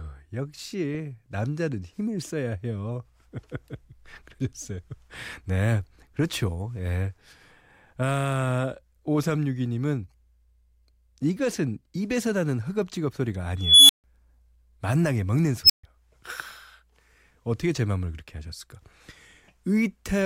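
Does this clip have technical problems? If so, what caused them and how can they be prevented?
Yes: an unstable filter makes a tone of around 3 kHz swell over 0.3 s at 13.59 s, and one of around 5 kHz over 0.06 s at 15.64 s. Each clips, overflows, and drops to silence for about 0.14 to 0.15 s. Checking recursive filter coefficients for stability before use prevents this.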